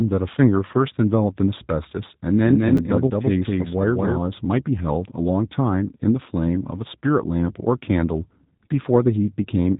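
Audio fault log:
throughout: G.729 codec. The speech has been squeezed through an 8 kbit/s G.729-style coder that rebuilds each 10 ms frame from a vocal tract filter, a pitch predictor and a few pulses, so the damage is plainly audible as a rough, slightly synthetic, buzzy texture. On a spectrogram everything stops at a hard ceiling near 3.8 kHz, and the harmonics below it look smeared and blocky rather than cleanly striated.
2.46–4.18 s: doubled audio track. A second full-band copy of the sound rides along about a fifth of a second behind the original and at roughly the same level, giving a slap-back, stuttering double image with no reverberant tail or room colour. It switches on and off abruptly at the edges of this span, most likely a second capture path or an edit leaving two copies out of step. A waveform shows each syllable's envelope repeated about 200 ms later.
2.77 s: chunks out of order. 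A very short slice of audio, about 5.33 ms long, plays one chunk late, after the slice that should follow it. Nothing is missing, but the swap creates three hard joins within about 11 ms, heard as a brief jumble. Zoomed in on the waveform, the trace shows abrupt discontinuities where the segments meet.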